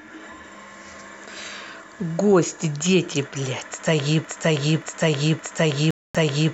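Speech that falls into a broken-record loop from 4.25 s to the end: a 0.57 s fragment repeats exactly, back to back, four times, and the speech that should have followed is gone. Unlike a brief skip or stutter, the same slice returns identically for over two seconds, which points to a player or stream that has likely stalled and keeps replaying its last buffer. Inside that loop, from 5.91 to 6.15 s, a digital broadcast dropout cuts the sound to silence for 0.24 s, a length that fits about ten lost frames. It differs from the loop because nothing repeats: the receiver mutes on bad or missing frames, then the looping fragment resumes.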